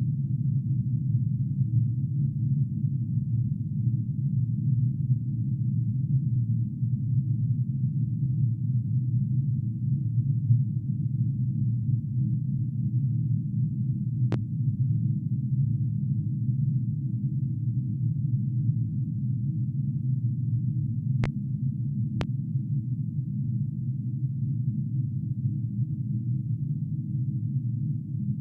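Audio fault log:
14.32–22.25 s, loud pop: three single sharp pops at 14.32–14.36, 21.24–21.27 and 22.21–22.25 s, each about 35 ms and roughly 10, 15 and 20 dB above the sounds, which carry on underneath. Likely a voltage spike from a plug, switch, static or driver glitch.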